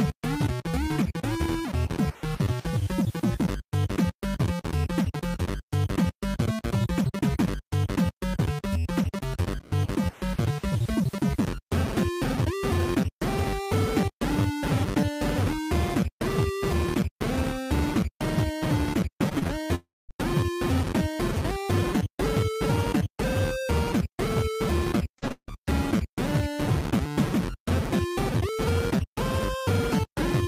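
Brief smears and wobbles at 19.29, 19.39, 19.47, 25.19 and 25.28 s come from short concealed packet loss, where 20 to 40 ms gaps were filled by extending the preceding sound. At 19.75 to 20.11 s and 25.32 to 25.50 s, a fading buzz or hiss turns to near-silence before the audio resumes with material missing, likely from a long network dropout.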